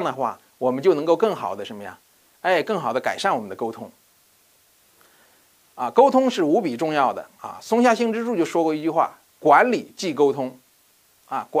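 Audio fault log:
Throughout: low bit depth with dither. A constant, even hiss sits under the whole clip with no added distortion, roughly 40 dB below the signal, which fits quantisation to about 10 bits. Random dither added before each sample was rounded has turned the coarse rounding error into steady white noise rather than harsh, signal-dependent grit. On a spectrogram this shows as a flat, uniform haze across all frequencies; the waveform carries a thin, unchanging noise band even in quiet stretches.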